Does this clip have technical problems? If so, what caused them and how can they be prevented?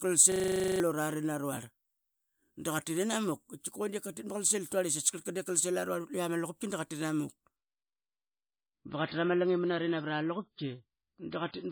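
Yes. A system hang loop runs from 0.32 to 0.80 s. The computer or driver stalled while the sound hardware kept replaying the same 40 ms slice of its ring buffer, twelve times over. That repeat rate of 25 Hz turns into a steady buzz rather than a stutter, and roughly half a second of real audio is lost underneath it. Prevent it by fixing the driver or system stall and by having the audio path mute on an underrun instead of recycling stale buffer contents.

An adaptive stream at a lower bitrate takes over at 7.56 s and lasts to the end of the clip. When the connection slowed, the player switched to a much leaner encode, and the sound points to a drop from 128 to 16 kbit/s MP3. The change is abrupt but seamless. Everything above 5 kHz vanishes, leaving the speech dull and muffled, with coarser coding artefacts. Prevent it with steadier bandwidth, a larger playback buffer, or a higher minimum bitrate in the stream's ladder.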